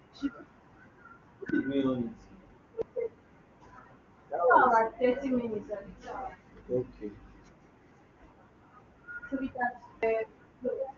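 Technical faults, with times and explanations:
1.49 s, 2.82 s and 10.03 s, dropped buffer (overrun): the speech jumps abruptly at each point, losing roughly 40, 150 and 100 ms. There is no gap, because the two sides are spliced directly, likely where incoming audio overwrote unread samples.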